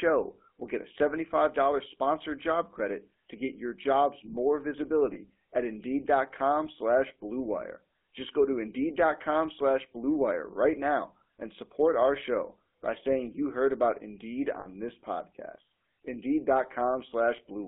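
Across the whole recording the speech has a buzzy, gravelly roughness, with nothing above about 3.5 kHz and little below 250 Hz. That is GSM full-rate codec damage, plainly audible: the voice is rebuilt from a coarse vocal-tract model and sparse pulse excitation, which fits 13 kbps GSM.

At 5.14 to 5.17 s, and again at 14.60 to 14.67 s, the sound briefly freezes into a rough, metallic ring. These are lost GSM frames, about 20 ms and then about 60 ms, which suggests one and then three frames. The decoder filled each gap by repeating the last good frame.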